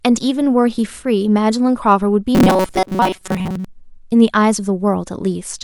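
From 2.35 to 3.65 s the speech turns into robotic sound from repeated short buffers: a rigid, metallic buzz locked at 188 Hz that still tracks the rough shape of the words. The likely cause is new audio arriving too late, so the playback keeps looping a tiny slice, about 5.3 ms given that pitch, while most of the real material in that stretch, something like two thirds or more, gets skipped.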